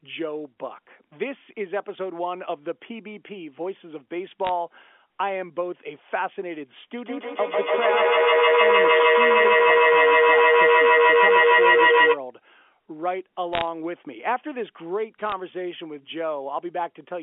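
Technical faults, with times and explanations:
4.45 to 4.49 s, 13.53 to 13.62 s and 15.18 to 15.33 s: bit errors on a digital phone line. Each burst is a short patch of sharp ticks and crackle laid over the speech, which carries on unchanged around them. On this G.711 line a flipped bit corrupts only the one sample it lands in, and a hit on the sign or a high-order bit throws that sample far off, so it clicks. The rate is low, a few tenths of a percent. Unlike dropouts or packet loss, nothing goes missing.
6.98 to 12.25 s: feedback howl. A tone near 500 Hz swells until it sits about 8 dB above the speech at its loudest. The sound comes round roughly every 150 ms, which fits a microphone-to-loudspeaker loop of about that delay that gains level on each trip, so the sound narrows to the frequency the loop favours. An echo fades with every repeat, but here the repeats grow, and the howl keeps going until the loop is broken at 12.25 s.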